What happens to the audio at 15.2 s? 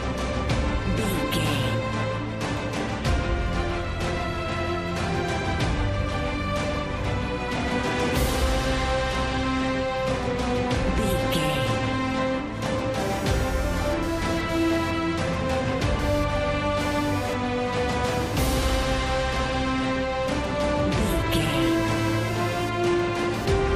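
At 15.2 s the audio carries computer activity noise, which runs from 12.99 s to the end of the clip. Processor, graphics or mouse load shifts the ground shared with the audio circuit, and those current swings leak into the signal. The result is a buzzy, chirping pulse train at around 200 pulses per second, sitting roughly 20 dB below the signal, whose pattern follows the computer's workload rather than the sound itself.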